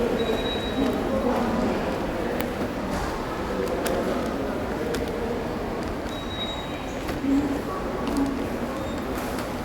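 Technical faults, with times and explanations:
Nothing here to flag: I listened all the way along this recording of sounds and didn't hear any technical problem.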